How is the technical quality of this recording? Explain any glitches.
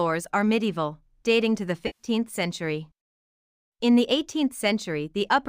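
The recording has one glitch, an AAC frame loss with concealment from 1.86 to 2.07 s. About 128 ms of data went missing, which fits six lost AAC frames. The decoder patched the hole from the last good spectrum, so instead of a clean silent gap or a click, the audio turns briefly smeared, noisy and phasey before recovering.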